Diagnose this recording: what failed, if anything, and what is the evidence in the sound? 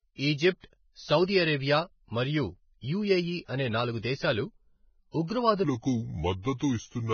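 Codec stage. The whole clip carries heavy Vorbis compression damage: nothing survives above 6.5 kHz, and the remaining treble is grainy and hissy, with roughened tones. That points to a very low bitrate, likely around 16 kbps, where the residue is quantised into noise.

Also a codec effect, pre-echo appears twice. A 38 ms hiss runs from 1.24 to 1.28 s, just before "అరేబియా మరియు యుఎఇ అనే". A 25 ms hiss runs from 5.27 to 5.30 s. In both cases block-spread quantisation noise fills the quiet moment ahead of an attack and softens it.

From 5.64 s to the end, a section at the wrong speed plays at 0.769 times normal speed, so the speech turns slower and deeper, about five semitones down. This is likely a playback or editing step that applied the wrong clock to that segment.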